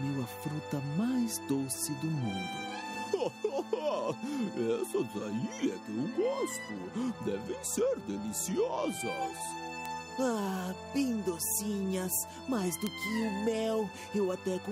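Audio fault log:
8.28 s, 9.86 s and 12.87 s: bit error spike. Each is a single sample knocked off its true value by a power of two, reaching about −34, −16 and −10 dBFS. The next sample is correct again, so all that is heard is a lone, dry tick spread across the whole spectrum and unrelated to the surrounding sound. Unlike a dropout or a buffer glitch, nothing around each tick is lost, repeated or shifted.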